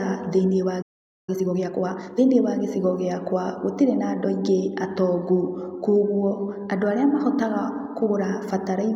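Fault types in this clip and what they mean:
playback stall: after "thĩinĩ wa" the speech drops to silence for about 0.46 s, 0.81 to 1.29 s, likely a starved or blocked player; waveform flatlines, spectrogram shows a blank gap.
time-compressed catch-up: from 1.29 to 2.19 s the speech runs 1.5 times fast at unchanged pitch, before "wa gicigo gĩakwa gũtirĩ"; spectrogram shows normal harmonics, squeezed syllables.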